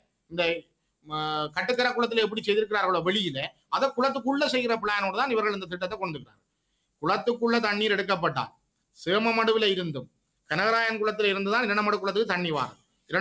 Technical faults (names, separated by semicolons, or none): noise suppressor applied to music or sounds; sound cut by the noise suppressor